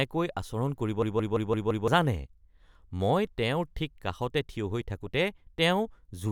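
At 1.02 s, just after "আচৰণ কৰিব", a system hang loop runs to 1.88 s. The driver stalled while the hardware replayed a 171 ms buffer five times, giving a 5.86 Hz machine-gun stutter. This fits an 8192-sample buffer and costs roughly a second of audio.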